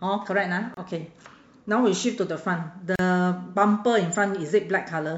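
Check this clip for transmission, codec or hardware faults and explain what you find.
The speech breaks twice with a gap at a join of encoded pieces: from 0.74 to 0.77 s (about 28 ms) and from 2.96 to 2.99 s (about 36 ms). Each is a brief hole of silence in continuous sound, its edges softened by the codec, after which the speech resumes exactly where it stopped. The pieces were encoded separately and butted together untrimmed, so each encoder's start-up delay and last-frame padding remain as dead air at the seam.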